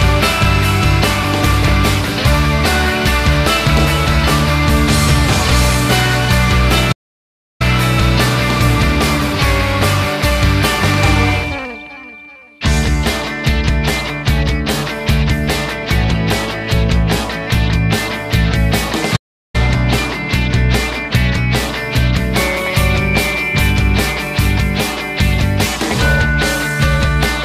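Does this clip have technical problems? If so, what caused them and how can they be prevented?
Yes. DAB burbling appears three times, at 1.44 to 1.72 s, 14.69 to 15.18 s and 20.96 to 21.16 s. Weak reception let bit errors, a fraction of a percent, slip past the error correction into the MP2 audio data. Corrupted samples then put short blips of noise into single sub-bands, and corrupted scale factors throw sub-bands up or down in level for up to a frame, giving a burbling disturbance over the sound, longest in the middle burst. Better reception, through a well-placed antenna or a stronger multiplex, keeps the error rate below what the error correction can repair.

A playback stall occurs twice, from 6.92 to 7.62 s and from 19.16 to 19.56 s. The player likely ran out of buffered data or had its audio thread blocked, so it produced no output until it recovered. The sound cuts off mid-flow and falls silent for about 0.68 s the first time and 0.38 s the second, then resumes. 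A larger playback buffer and giving the audio thread priority over other work prevent these gaps.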